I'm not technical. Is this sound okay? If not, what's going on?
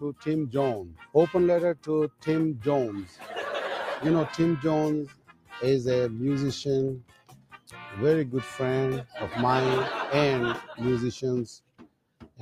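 No. Throughout the clip, a noise suppressor built for speech is applied to music or sounds: it mistakes steady, lingering sound for background noise and keeps turning it down, so the level pumps.

Sound cut by the noise suppressor happens at 0.0–0.28, 0.8–1.15, 1.74–1.89, 2.08–2.28, 2.95–3.35, 5.05–5.55, 6.99–7.74 and 11.59–12.41 seconds, where held or fading sound sinks sharply and its tail gets cut short.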